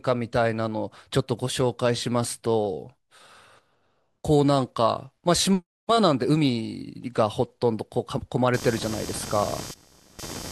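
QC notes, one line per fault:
8.54 to 10.51 s, computer activity noise: a rough, chattering buzz appears abruptly and continues to the end of the clip, pulsing at around 200 times a second and sitting only about 15 dB below the speech. It ignores the speech's rhythm and loudness entirely. The pattern points to processor or graphics load shifting the ground reference the audio circuitry shares with the computer, so the machine's activity gets written straight into the recording.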